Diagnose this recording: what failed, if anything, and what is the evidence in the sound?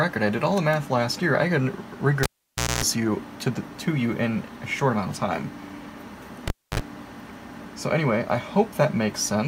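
The analogue wiring failed: a cable was pulled and plugged in twice, at 2.23 to 2.84 s and 6.48 to 6.80 s. Each event starts with a pop and near silence lasting about 0.56 s and 0.27 s, then mains buzz while only the tip connects (0.24 s at 60 Hz, then 0.05 s at 50 Hz), and a second pop as the sound returns. That tip-contact hum marks a physical reconnection, unlike a clean digital dropout.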